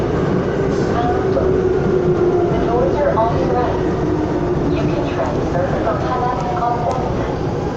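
No technical faults are audible anywhere in the recording.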